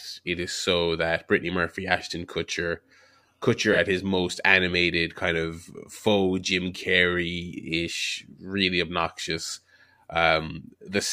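At 3.72 to 3.77 s, just before "his most animated kind", the speech briefly turns smeared and noisy for about 50 ms. This is AAC frame loss with concealment: a gap that fits a single lost frame was patched by rebuilding audio from the preceding spectrum.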